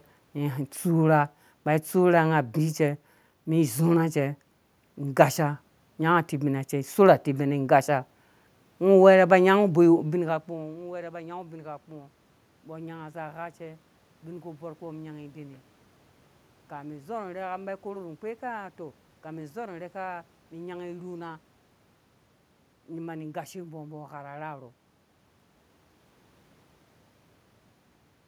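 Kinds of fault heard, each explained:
No system faults are heard in this recording.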